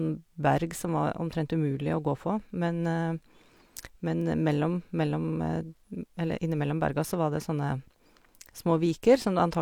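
No technical faults can be heard anywhere in the recording.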